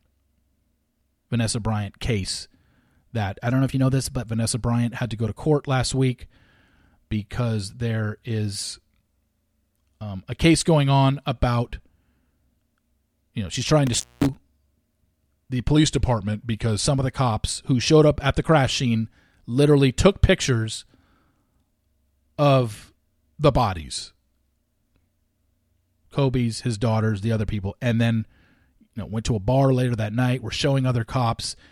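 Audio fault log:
3.50–4.22, 8.63–9.81, 15.76–16.86 and 23.77–24.30 s: drift correction step. After "that I" the audio runs 6.4% fast and about 107 cents sharp. From 8.63 s (after "because there", before "um a case going"), at 15.76 s and after "of the" at 23.77 s it runs 6.4% slow and about 114 cents flat, then snaps back each time. The likely cause is clock-matching software changing the playback rate in one jump to rebalance its buffer.
13.87–14.35 s: intermittent contact. The signal drops out for about 218 ms with crackle where it breaks and returns, as a loose plug or cable briefly loses connection and the line carries only faint hiss until contact resumes.
29.02 s: corrupt FLAC frame. A brief disturbance peaking at about −32 dBFS points to a single damaged frame. The decoder accepted flipped bits without checking the checksum, so its prediction ran on wrong values until the next intact frame restored clean output.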